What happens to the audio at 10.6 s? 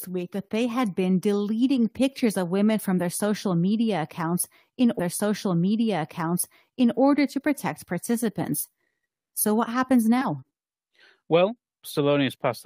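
Nothing goes wrong at 10.6 s: the speech carries on intact through that moment, with no dropout, click or distortion to be heard.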